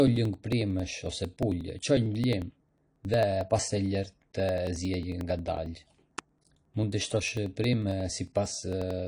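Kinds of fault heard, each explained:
AAC compression: The speech is dull and smeared, with nothing above about 10.1 kHz and a plainly audible fizzy, warbling texture on sibilants. This points to likely low-bitrate AAC-LC coding around 32 kbps. The swirl sets it apart from a simple low-pass filter.
Periodic USB or driver dropouts: Roughly every 0.09 s from 0.07 s to 9.00 s, around 10 ms of speech is skipped rather than silenced, giving about a hundred evenly spaced ticks. Their strict regular spacing distinguishes them from random network packet loss.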